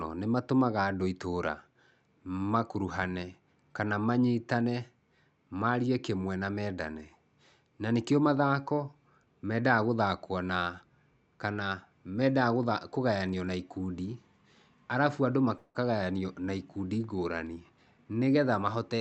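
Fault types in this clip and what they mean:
call audio freeze: At 15.57 s the speech stalls, its last sound held as a fading buzz for 174 ms, then resumes where it left off at 15.77 s. Likely cause: delayed packets emptied the jitter buffer, inserting a gap while losing nothing.
jitter buffer speed-up: From 17.60 s to 18.99 s the speech sounds hurried, running at 111% speed with unchanged pitch. The jitter buffer had built up excess delay, so the receiver repeatedly trimmed pitch-period-sized slices, removing roughly 150 ms in all.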